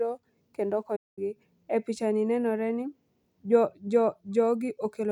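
A playback stall cuts this speech clip from 0.96 to 1.19 s, roughly 210 ms of silence, likely from the player's buffer running dry before output resumed.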